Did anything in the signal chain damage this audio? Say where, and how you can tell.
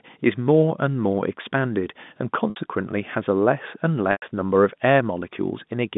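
Yes. Packet loss with pitch repetition in the network stage: gaps at 2.50–2.56 s (60 ms) and 4.12–4.22 s (100 ms). The receiver repeated the last pitch period to fill the gaps. The first gap sounds held and buzzy. The longer second gap fades toward silence before the sound cross-fades back. The gap lengths fit lost 20 ms packets, and the dropouts sit on a G.711 telephone band that carries nothing above about 3.6 kHz.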